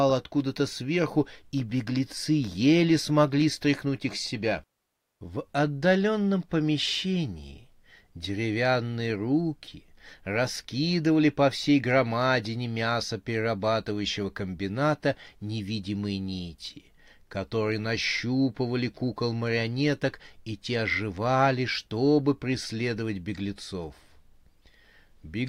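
Nothing here needs flagging: it's a speech recording with no technical faults to point to anywhere along its run.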